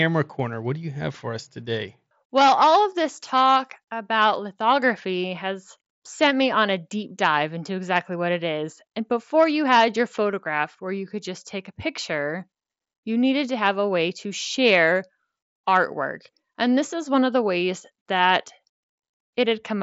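No technical faults are audible.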